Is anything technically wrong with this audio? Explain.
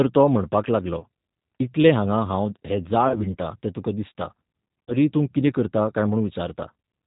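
Yes. The whole speech clip runs through the G.729 codec at 8 kbit/s: nothing above 4 kHz, and a rough, slightly synthetic edge from the pulse-based rebuild.

There's also VoIP packet loss concealed by the speech codec at 0.99–1.05 s, 3.08–3.26 s and 4.85–4.93 s, each a 30 ms gap. The decoder stretches its last pitch and filter into a fading buzz or coloured noise, then takes a moment to recover.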